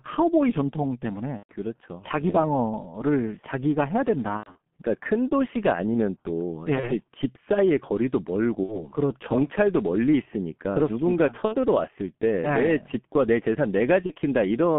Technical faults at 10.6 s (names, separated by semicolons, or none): G.723.1 codec